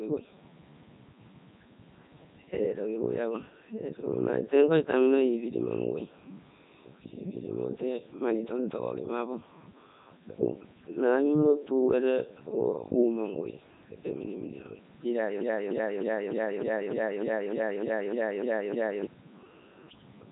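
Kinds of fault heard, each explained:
Codec 2 vocoder: the speech comes through robotic and buzzy, rebuilt from pitch, voicing, energy and a spectral envelope rather than the original waveform, which points to the 3.2 kbit/s mode. A spectrogram shows neat synthetic harmonics, nothing above 3.8 kHz, and a waveform unlike the source.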